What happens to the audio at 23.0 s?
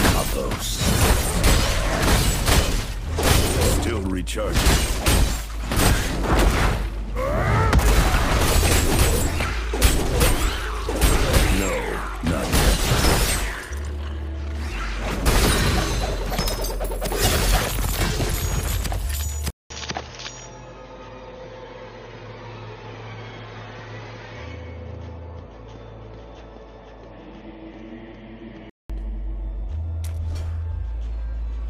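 At 23.0 s the sound is dull and narrowed, with nothing above 6.6 kHz, a faint new background hiss and no real level change. This runs from 19.50 to 28.90 s, after a 200 ms silence at the switch, likely an input switched to a poorer device.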